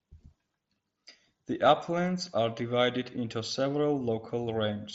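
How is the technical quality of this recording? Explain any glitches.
No technical faults are audible in this recording.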